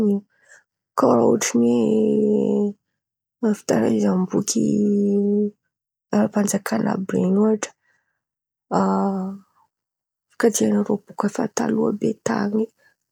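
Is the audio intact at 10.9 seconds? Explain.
Yes, the speech at 10.9 seconds plays through cleanly with no audible fault at that moment.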